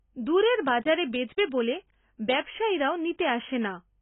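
Throughout, the speech sounds dull and smeared, with nothing above 3.8 kHz, likely heavy AAC compression at a very low bitrate, around 16 kbps.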